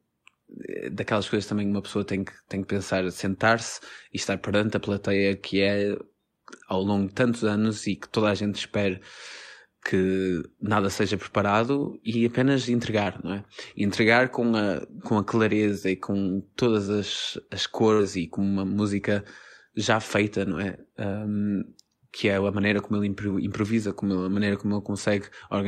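A Portuguese speech recording carries two packet-loss faults. At 13.03 to 13.07 s, just after "seja preparado e apenas" and before "não é", there is short concealed packet loss. About 20 ms of audio never arrived in time. The receiver extended the preceding sound to cover the hole, then blended back into the real signal. The result is a brief smear rather than a clean cut. A burst of packet loss follows at 17.93 to 18.01 s, between "com todas as as" and "e com uma música". Here about 60 ms went missing in a row. The decoder held the last sound and let it fade across the gap. It is heard as a short held buzz or dying hiss. Speech then resumes further on, with that stretch gone.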